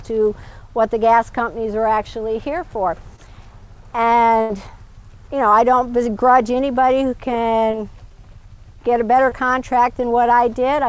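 At 3.16 to 3.20 s there is a short concealed packet loss. About 20 ms never arrived in time, and the receiver extended the preceding sound to cover it before blending back, leaving a brief smear or wobble. From 4.42 to 4.51 s comes a burst of packet loss: roughly 80 ms went missing and was filled with a continuation of the last sound that fades as the gap runs on, heard as a held buzz or hiss before the audio resumes with that stretch gone. Two more short concealed packet losses, each about 20 ms, fall at 7.71 to 7.75 s and 9.29 to 9.33 s and produce the same brief wobble. The audio is band-limited with nothing above 8 kHz, which fits a G.722 call codec at 64 kbps.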